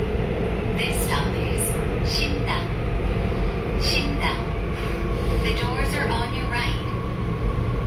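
Throughout, two kinds of coding artefacts overlap, with nothing above 19.5 kHz. Likely transcoding between lossy codecs, consistent with HE-AAC re-encoded to Opus.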